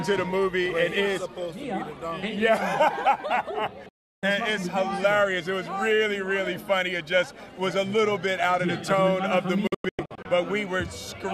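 At 3.89 s the audio snaps to silence and returns at 4.23 s. This is a digital broadcast dropout. The receiver stopped getting valid frames and muted its output. The cut is abrupt, with a fade of only about 3 ms. The missing third of a second is simply gone. A second dropout runs from 9.67 to 10.26 s. Here the sound breaks into several short holes, the longest 96 ms, as good and bad frames alternate.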